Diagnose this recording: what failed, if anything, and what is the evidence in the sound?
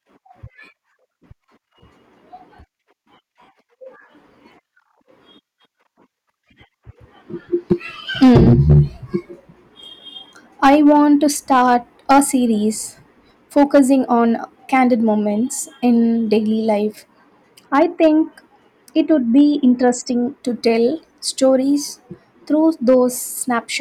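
Hard clipping runs through the whole speech recording. The signal was driven about 8 dB past the ceiling of a converter or fixed-point format stage, so roughly one sample in a hundred is cut off flat. Each loud syllable carries a brittle crackle. On a waveform the peaks sit as square plateaus. A spectrogram shows thin vertical smears of harmonics reaching far above the speech band at every clipped peak.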